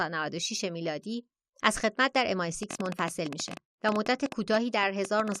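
A train of clicks runs from 2.63 to 5.36 s: around 30 similar pops at 10.6 per second, unevenly spaced, loud over the speech, likely from interference.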